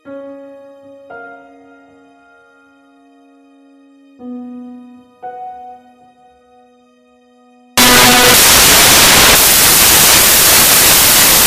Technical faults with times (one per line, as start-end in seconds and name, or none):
7.77-11.47 samples built from the wrong bytes